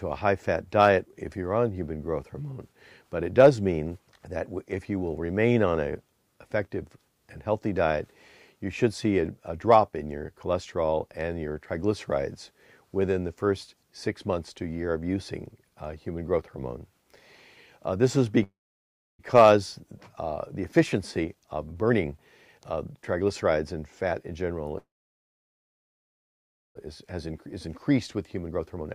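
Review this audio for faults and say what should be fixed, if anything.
There are two call audio freezes. The first runs from 18.43 to 19.21 s, and the second from 24.78 to 26.77 s. In each, the sound stops and a short fading tail gives way to silence. That silence lasts about 0.65 s the first time and about 1.89 s the second. Then the audio resumes where it left off, with nothing lost. The likely cause is delayed packets draining the jitter buffer. The receiver stretched the last sound while it waited. To prevent it, fix the network path that is stalling packets.

There are three jitter buffer speed-ups, where the audio rushes along at its normal pitch. The first is from 20.59 to 22.19 s at 131% speed. The second is from 22.58 to 24.33 s at 114%, and the third is from 26.86 to 28.89 s at 113%. The first and third each follow a freeze. The buffer had filled past its target, so the receiver cut tiny pitch-period slices to catch up. 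About half a second was trimmed in the first span, and roughly 0.3 s in each of the others. To prevent this, stop the packet bursts, or let the buffer shrink more gently.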